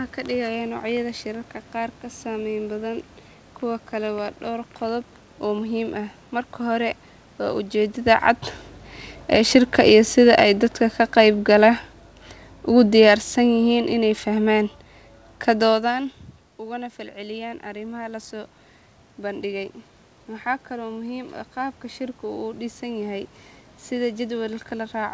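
Between 9.18 and 15.97 s the speech and its background sink together by about 9 dB: automatic gain falling, as the gain control judged the input too loud or its background noise too strong.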